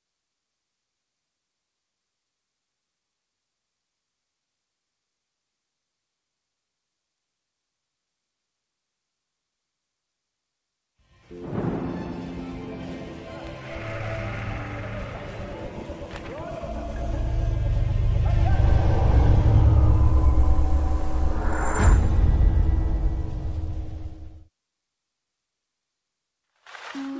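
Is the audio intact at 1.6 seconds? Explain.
Yes, the audio is intact at 1.6 s, with nothing there beyond the normal sound of the G.722 call path, whose content stops at about 8 kHz.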